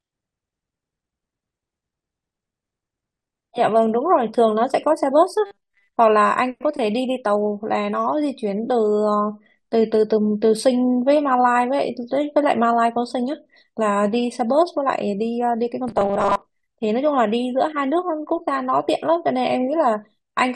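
Robotic sound from repeated short buffers affects this speech at 5.46 to 5.90 s and 15.88 to 16.42 s: the voice becomes a rigid metallic buzz at 200 Hz, likely from a 5 ms chunk being looped while most of the real audio is skipped.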